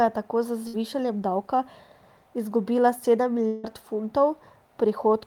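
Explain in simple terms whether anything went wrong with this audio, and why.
A burst of packet loss hits at 0.67 to 0.75 s, right after "je tako z". A few chunks of the speech never arrived, so the player stretched the last sound into a brief buzz or hiss for about 60 ms, then jumped ahead, skipping that bit.

A long network dropout likely explains the gap at 3.47 to 3.65 s, just after "izgubila sedem". For about 160 ms the last sound is held and fades, with no pure silence, and then the speech resumes with that stretch missing.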